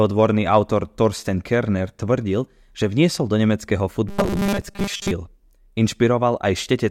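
From 4.09 s to 5.11 s, just after "že vniesol do nemeckého", the speech takes on a robotic sound from repeated short buffers. For about a second it becomes a rigid metallic buzz at 200 Hz that still roughly tracks the syllables. The likely cause is audio arriving too slowly, so the playback side loops a 5 ms fragment to fill the gaps, and most of that stretch is repetition rather than new speech.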